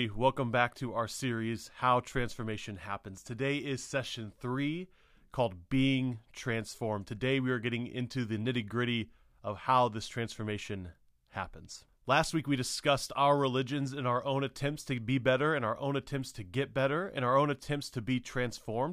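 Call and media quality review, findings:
Nothing stood out on listening to this speech recording.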